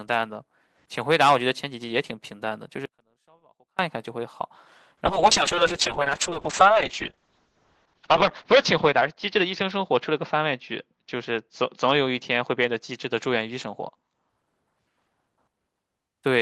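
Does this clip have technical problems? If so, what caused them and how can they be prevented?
Yes. From 2.86 to 3.79 s the speech cuts out abruptly for about 0.93 s, leaving only faint sound roughly 35 dB below the signal. This is an audio dropout to a faint residue, likely from a brief loss of the wanted signal while the downstream path stayed live. Preventing it means securing connections and input routing so the source can't momentarily drop out.

From 5.07 to 14.35 s the speech turns rough and muffled. High frequencies above 8 kHz vanish, where before they reached about 20 kHz, and it is worst for roughly 3.1 s. This is a call bitrate drop: the bandwidth estimate fell, and the sound fits the encoder falling from around 32 kbps to about 6 kbps, coarsening the coding and narrowing the band. A steadier network link with more headroom, or a higher minimum encoder bitrate, would prevent it.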